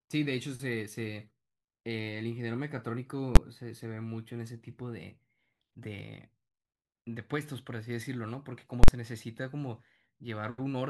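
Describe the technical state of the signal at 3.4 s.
At 3.36 s a calculation in the processing chain produced invalid numbers at full scale: infinite or undefined values were clamped to maximum amplitude for one block of about 12 ms, which fits a 512-sample block. The speech is replaced by a single sharp, very loud bang.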